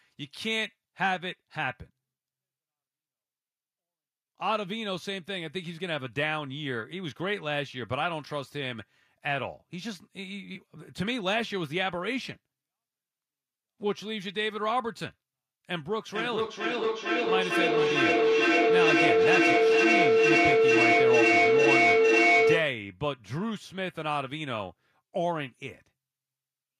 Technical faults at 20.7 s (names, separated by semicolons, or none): feedback howl